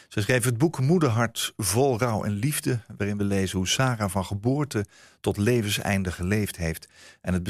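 Speech, with no technical fault audible anywhere in the signal.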